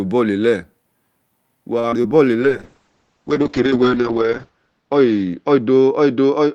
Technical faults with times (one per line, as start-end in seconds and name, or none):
1.79-2.26 repeated packet loss (robotic sound)
2.42-6.55 call bitrate drop